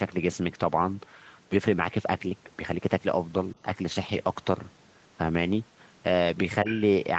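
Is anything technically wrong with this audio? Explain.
Yes. From 6.67 to 6.75 s, a brief scrap of a second voice, around 10 dB below the main speech, cuts in. This is the other side's voice leaking through, likely because the echo canceller failed to fully remove the far end's loudspeaker playback from the microphone. Unlike room reverberation, which trails the talker's own voice, this 80 ms fragment is a different talker's sound, clipped short, inside the same 8 kHz-limited call band as the rest.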